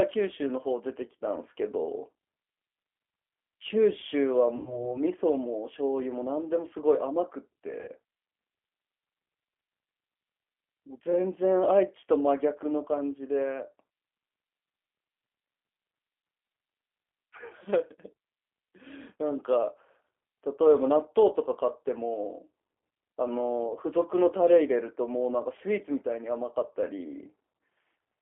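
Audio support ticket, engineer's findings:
G.729 codec throughout: rough, slightly synthetic speech, band limited to 300 Hz to 3.4 kHz, pitch-and-pulse reconstruction at 8 kbit/s; synthetic grain, unlike a plain low-pass line.

VoIP packet loss concealed by the speech codec, 4.57 to 4.93 s and 7.81 to 7.89 s: buzzy or noisy fading extension, weak recovery after; 90 ms gap fits three 30 ms packets, 60 ms two; decaying tone or noise, not silent dropout.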